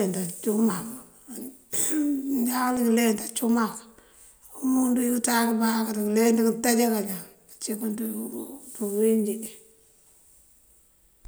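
A single tick at 2.77 s is a block of digital silence: about 0.73 ms of the speech drops abruptly to silence, likely from an output buffer left unfilled.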